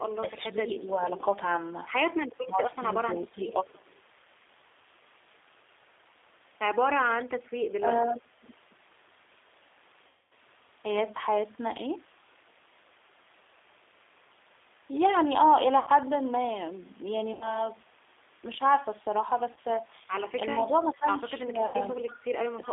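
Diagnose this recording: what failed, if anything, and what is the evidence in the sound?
The whole call has passed through the G.729 codec at 8 kbit/s, which is a codec-stage fault. The band is held to roughly 300 Hz to 3.6 kHz, and the speech has a rough, synthetic edge. A spectrogram shows a hard ceiling near 3.6 kHz with nothing above it and a thin floor under 300 Hz. The harmonics inside the band look smeared. The coder rebuilds each 10 ms frame from a filter, a pitch predictor and a few pulses, so fine detail is lost.

Speech suppressed in double talk, which points to call processing, dips the talker at 2.4 to 3.57 s (about 15 dB at worst, roughly 0.7 s affected), 7.78 to 8.45 s (about 20 dB, roughly 0.4 s) and 20.56 s to the end (about 15 dB, roughly 0.5 s). The waveform envelope drops in chunks, and the spectrogram thins above the midrange. The likely cause is an echo canceller that could not separate the near talker from loudspeaker echo and turned both down.

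An echo leak, also at the call-processing stage, puts a faint delayed copy of the voice 361 ms behind the original. It appears at 3.4 to 4.02 s (about 30 dB down), 20.49 to 20.87 s (about 20 dB down) and 22.07 to 22.68 s (about 25 dB down). On a spectrogram it shows as weak repeats of the speech contours offset by 0.36 s. The likely cause is a far-end loudspeaker whose echo the canceller did not fully remove.

VoIP packet loss concealed by the speech codec is a network fault. It occurs at 10.07 s (240 ms lost), 15.79 s (80 ms), 17.33 s (80 ms), 19.52 s (40 ms) and 21.66 s (80 ms). Each gap is bridged by a buzzy, stretched tone or a coloured noise that fades. A spectrogram shows frozen, smeared harmonics in place of moving formants, and the waveform shows a decaying envelope. Weak, distorted speech lingers after the gaps because the decoder rebuilds each frame from the last one.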